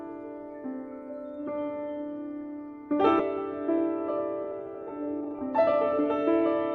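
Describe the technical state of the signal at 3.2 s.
At 3.19 to 3.21 s the audio lurches forward with no gap, as if about 0.7 s had been cut out and the two sides butted together. This is a skip ahead: a stretch was discarded in transit or by an overflowing jitter buffer while later audio was already waiting.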